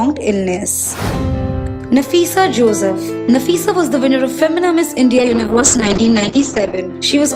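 At 5.19 s the call's bandwidth estimate collapses and the encoder is forced onto a much thinner stream, a call bitrate drop that fits a fall from around 40 kbps to around 8 kbps. The coder quantises far more coarsely and narrows the audio band from 20 kHz to 8 kHz, so the sound turns muffled and rough, with a watery smear. It stays at its worst for about 1.6 s before recovering at 6.85 s.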